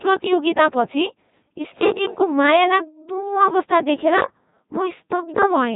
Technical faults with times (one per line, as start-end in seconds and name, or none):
0.00-5.75 Codec 2 vocoder